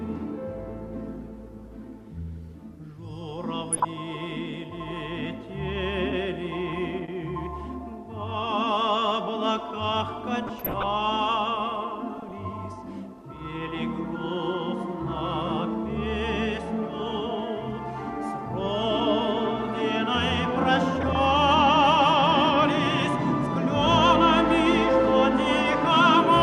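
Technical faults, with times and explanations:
3.73–3.85 s, 6.70–6.77 s, 10.38–10.83 s, 12.18–12.31 s and 20.96–21.15 s, DAB burbling: Weak reception lets bit errors, a few tenths of a percent, slip past error correction. Corrupted sub-band samples add short blips of noise and corrupted scale factors make sub-bands jump in level, longest near 10.4 s.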